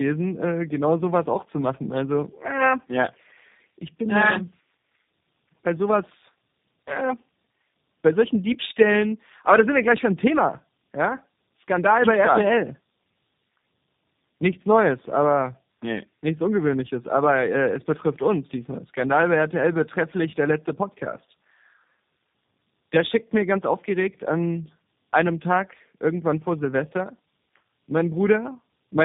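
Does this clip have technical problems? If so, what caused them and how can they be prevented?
Yes. Tandem speech coding runs throughout: two low-rate speech codecs in sequence, likely AMR-NB then G.729A, the second re-coding the first's output, leaving rough, warbly, muffled speech with nothing above 3.8 kHz. Prevent it by keeping one codec end to end or negotiating transcoder-free operation between networks.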